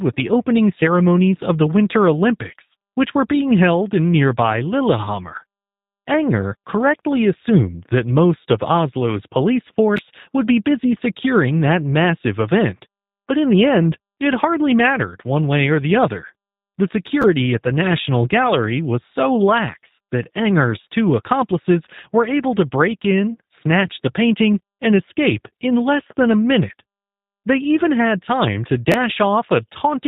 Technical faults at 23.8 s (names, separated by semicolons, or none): G.729 codec